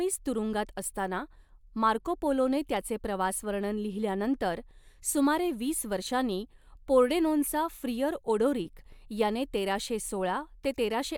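No audible technical faults.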